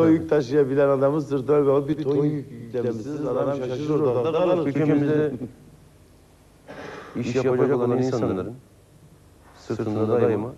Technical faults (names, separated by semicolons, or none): channel delay (doubling)